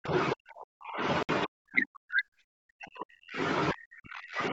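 Right from the start the speech keeps getting pushed down, from 0.0 to 0.14 s and again from 0.33 to 1.03 s. That's speech suppressed in double talk, likely the echo canceller treating this talker as loudspeaker echo while the far side talks and ducking everything, sometimes by around 40 dB, so the voice sinks in patches. At 1.23 s there's a sharp 61 ms hole, a Bluetooth dropout that fits a few packets going missing. The audio cuts to silence and comes back at 1.29 s as though it had kept playing underneath. The suppression then returns from 1.44 to 2.25 s, 2.45 to 3.4 s and 3.72 s to the end, with the same deep dips each time.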